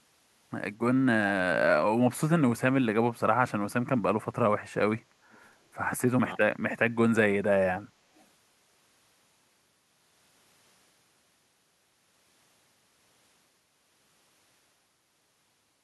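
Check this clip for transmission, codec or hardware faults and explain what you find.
Echo leak occurs twice, from 5.32 to 5.39 s and from 8.16 to 8.25 s: faint, brief copies of the speech trail it by 228 ms, far below the main level. This is likely a loudspeaker-side echo canceller leaving a residue that is sent back.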